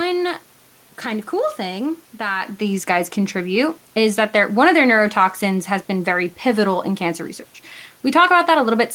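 Nothing stood out on listening to this speech; the background room noise and the shift in level early on as the talker moves relative to the microphone are part of the recording itself.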